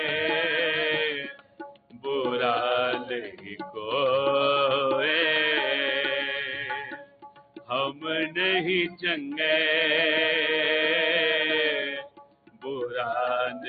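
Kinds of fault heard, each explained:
Noise suppressor applied to music or sounds: A suppressor built for speech stayed active. It treats steady tones, ambience and decay as noise. The level swings by about 15 dB as it clamps and releases. Held sound sinks while attacks get through, so the sound pumps and thins.
Sound cut by the noise suppressor: Some passages are pulled down further than the rest. The deepest dips, about 18 dB, fall at 1.21 to 2.05 s, 6.82 to 7.71 s and 11.94 to 12.67 s. Shallower cuts come at 3.29 to 3.77 s and from 13.51 s.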